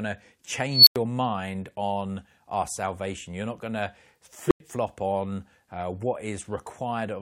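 Speech with an unstable filter, twice: at 0.70 s a tone near 4 kHz swells over about 170 ms, then drops to roughly 93 ms of silence before "mind on our salvation". At 4.47 s, after "not going to", a tone near 400 Hz builds in only 40 ms and likewise falls silent before "flop on uh". Runaway recursion explains it, unlike acoustic feedback, which howls steadily rather than collapsing into a dead gap.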